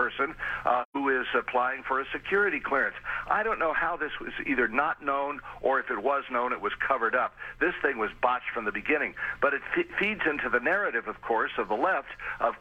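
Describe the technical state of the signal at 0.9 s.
At 0.9 s the audio is inside an AAC frame loss with muting, from 0.82 to 0.96 s. Missing frames were zeroed, leaving a soft-faded silent gap of about 128 ms.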